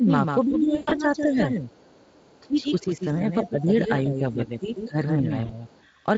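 Speech carried over a Speex link at about 28 kbps shows several faults, with only light codec roughness beneath them. Throughout the clip a doubled audio track is audible. A second full-band copy of the speech trails the original by roughly 150 ms at about 5 dB lower, most likely from a second capture path or a misaligned edit. Unlike a room echo or reverb, this copy has no decay tail and no added colour. It is the same sound, shifted in time. Speech suppressed in double talk shows up as level dips at 0.0 to 0.09 s, dropping by about 15 dB for only a few tens of milliseconds, then from 0.41 to 1.69 s and from 2.41 to 5.65 s, with dips of about 10 dB covering around one second and two seconds respectively. The likely cause is an echo canceller that could not separate the talker from loudspeaker echo while both sides spoke, so it pulled the near voice down. These are clean drops and thinning with no buzz, which sets them apart from packet loss. 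VoIP packet loss concealed by the speech codec occurs from 0.75 to 0.93 s, where about 140 ms of audio is missing across a 160 ms stretch, with the longest gap near 120 ms. That pattern fits about seven lost 20 ms frames. A shorter loss of about 40 ms follows at 5.45 to 5.55 s. In these spots the decoder stretches the last sound into a fading buzzy tone or coloured noise, and the voice stays weak for a moment after audio resumes, which an echo-canceller dip does not do. The other side's voice leaking through is heard faintly from 1.69 to 2.4 s and again from 5.67 to 5.84 s, about 35 dB below the main speech. It is likely loudspeaker output that the echo canceller left in the microphone signal. Unlike the doubled track, this is a different voice rather than a delayed copy, and it fills the gaps right after the suppressed stretches.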